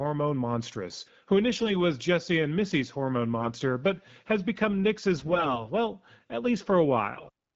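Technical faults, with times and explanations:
1.55–1.71 s, 3.38–3.50 s, 5.16–5.65 s, 7.12–7.30 s: AMR bit errors. About 4 to 10 percent of the weakly protected bits in the wideband frames flipped, so excitation pulses land wrongly and pitch, gain and spectral values drift, turning the speech hoarse, scratchy and gargly at near-normal pitch and level.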